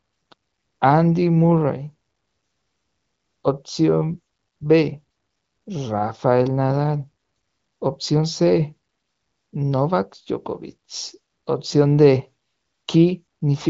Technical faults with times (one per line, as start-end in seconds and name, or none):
none